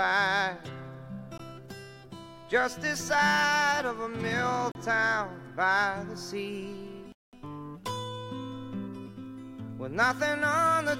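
Three dropouts at 1.38 s, 4.72 to 4.75 s and 7.12 to 7.33 s cut the sound to silence for 19, 36 and 206 ms before it resumes, likely a Bluetooth stall where late packets starved the receiver's buffer. Each appears as a flat gap in the waveform and a full-height blank column on the spectrogram.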